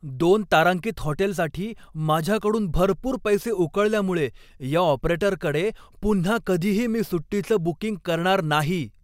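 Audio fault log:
No faults detected.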